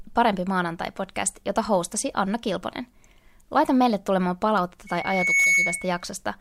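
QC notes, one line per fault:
4.87–6.05 s, loudspeaker feedback squeal: right after "meille tulemaan palautetta" a single pure tone at 2.2 kHz rises out of the speech. It swells over about half a second and settles at roughly 5 dB above the voice, holding as a piercing whistle until it stops at 6.05 s. A microphone was picking up the loudspeaker it fed, and at 2.2 kHz the loop gain went past one, so that frequency kept feeding itself and grew until it dominated.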